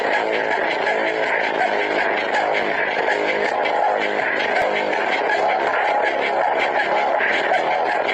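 Overlap between stream segments produces tiny skips at 0.63, 2.63, 4.62 and 6.61 s, repeating every 2.0 s. At each boundary, overlapping time stamps make the player discard a few milliseconds of sound that was never actually duplicated, so the waveform jumps and a brief skip is heard.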